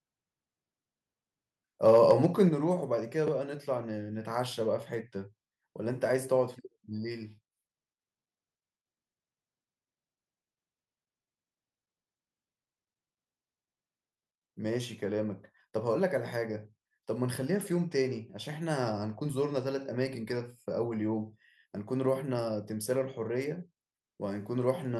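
From 1.86 to 2.25 s the speech breaks into a harsh, crackly edge on its loudest syllables. This is microphone overload. The peaks run about 2 dB past what the converter can represent, so their tops are flattened. Only a small share of samples are cut, so the damage is brief grit rather than constant distortion. The likely cause is an input volume set too high at the microphone.

At 2.5 s, just after that distorted stretch, the whole signal drops by about 5 dB in a single step. Speech and background fall together, with no fade. This is a microphone volume stepped down. The likely cause is call software reacting to the clipping by lowering the device's input volume at once.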